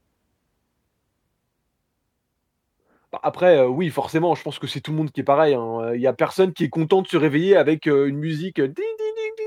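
No technical faults can be heard anywhere in the speech recording; the signal stays continuous and steady at every point.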